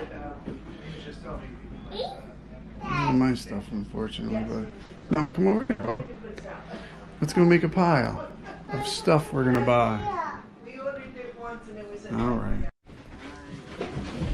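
From 4.69 to 6.17 s there's repeated packet loss, the robotic kind: hole after hole gets patched by stretching the last bit of sound, about 640 ms in all, the longest gap 120 ms. With 43% of that stretch faked, it comes out choppy, with pieces missing.

Then from 8.06 to 9.55 s come periodic USB or driver dropouts. Every 0.249 s something stalls the audio path and roughly a millisecond is simply skipped, around seven times, so you hear a steady run of small ticks spaced evenly a quarter second apart.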